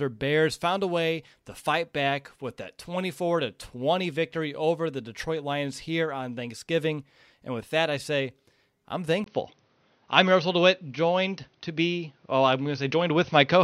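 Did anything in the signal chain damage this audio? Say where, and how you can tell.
Yes. An input switched to a poorer device at 9.24 s, just after "that I say I'm", and stays through to the end. A gap of about 20 ms is followed by a level shift of about 5 dB, content above 6.3 kHz vanishes, and a new noise floor appears roughly 45 dB down. This is likely a driver-level change to a narrower-band microphone.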